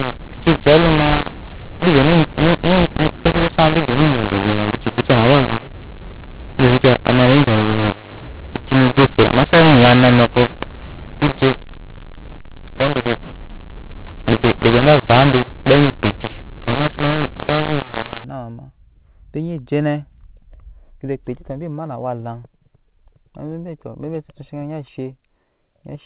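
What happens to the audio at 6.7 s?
At 6.7 s the speech sits inside a stretch of mu-law and A-law mixed up, running from the start to 18.24 s: samples coded as A-law are being decoded as mu-law, so every level is remapped wrongly. Some peaks come out too large and others too small, and near-silent samples are pushed well above zero. The voice sounds harsh and gritty, with hiss filling the pauses. On a waveform the envelope looks jagged and the gaps never flatten. A spectrogram shows broadband distortion smeared up to the 4 kHz telephone limit.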